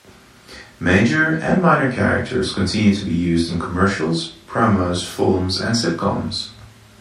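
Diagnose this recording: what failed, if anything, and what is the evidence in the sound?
MP3 compression, codec stage, throughout the speech: s sounds have a watery, swirly quality, with consonant attacks smeared. This likely comes from an encoder short of bits, as at roughly 64 kbps, dropping weak frequency lines frame by frame.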